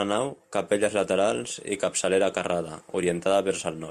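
Speech recording with no audible technical faults anywhere.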